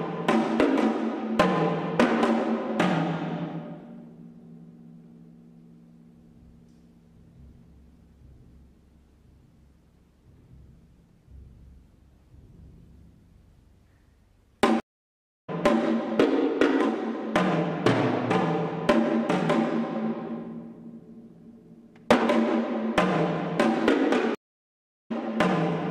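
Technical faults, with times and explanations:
14.8 to 15.5 s and 24.35 to 25.12 s, stream reconnect: twice the connection dropped and the audio went dead, for 666 ms the first time and 738 ms the second. When it comes back it doesn't pick up where it left off. It jumps ahead by roughly 0.7 s, because the player reconnected and started a fresh decoder at the stream's current position, so you hear a gap followed by a skip forward.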